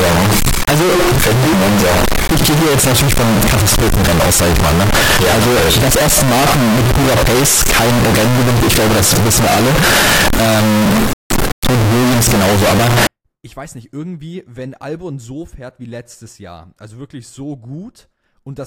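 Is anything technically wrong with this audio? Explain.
Yes. From 0.0 to 13.07 s, float read as integer: 32-bit float samples were likely decoded as 32-bit integers. The speech turns loud, harsh and square-like, noise as loud as speech.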